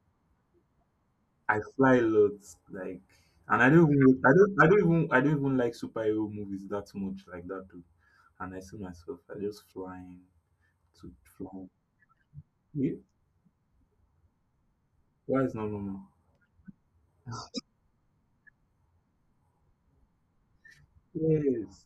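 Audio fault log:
No audible faults detected.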